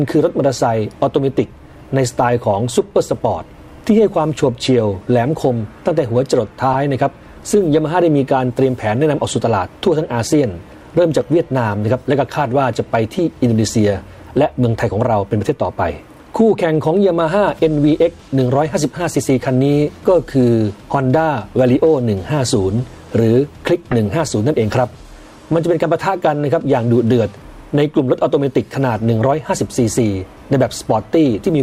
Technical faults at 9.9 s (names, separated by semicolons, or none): none